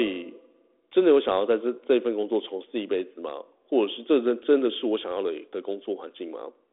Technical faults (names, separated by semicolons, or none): none